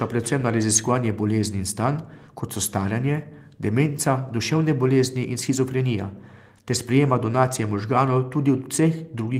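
Nothing technically wrong turns up anywhere in this short speech recording, so there's nothing to flag.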